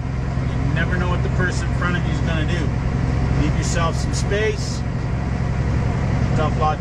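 At 6.32 to 6.37 s, damaged data in a compressed stream produces a brief disruption lasting about 50 ms as the decoder misreads corrupted frames and hunts for the next valid header. A spectrogram shows a short discontinuity; the waveform shows an abrupt break.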